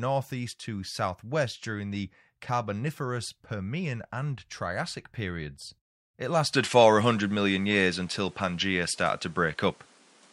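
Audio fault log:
6.53–10.33 s, input switched to a poorer device: sound dulls abruptly without a gap. The spectrogram is empty above 11.4 kHz, the waveform level shifts about 5 dB, and a new noise floor appears, likely from another microphone.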